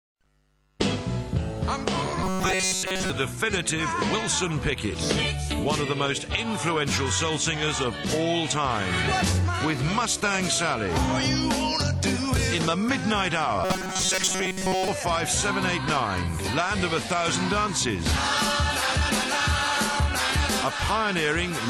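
From 2.24 to 3.10 s, and again from 13.64 to 14.88 s, you get robotic sound from repeated short buffers: a stiff, metallic buzz locked at 188 Hz. It's likely audio arriving too slowly, so a roughly 5 ms chunk gets looped through most of each stretch.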